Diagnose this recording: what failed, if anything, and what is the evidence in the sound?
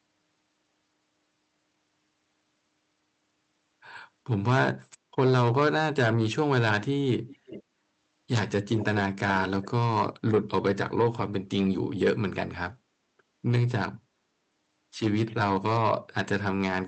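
Call processing at the far end is the likely failure: its echo canceller let part of the loudspeaker signal back into the microphone, producing an echo leak. A faint, delayed copy of the speech returns about 397 ms after the original, at 7.28 to 7.63 s, 8.77 to 9.01 s and briefly at 9.62 to 9.67 s. It is strongest in the second burst, around 10 dB below the speech, and barely audible in the last. The speech throughout is band-limited near 8 kHz, consistent with the call codec.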